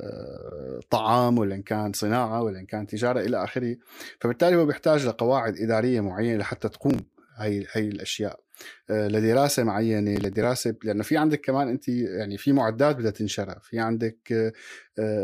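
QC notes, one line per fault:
6.90–7.29 s and 10.16–10.44 s, processor overload crackle: short bursts of gritty, tearing crackle over the speech. A heavily loaded processor missed a run of deadlines on buffers of only a few milliseconds, about ten and seven across each burst. Each missed buffer was skipped, leaving a hard-edged jump.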